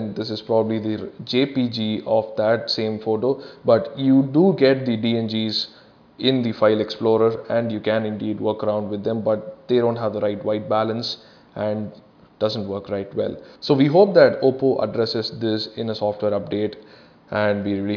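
No technical fault can be heard anywhere in the signal.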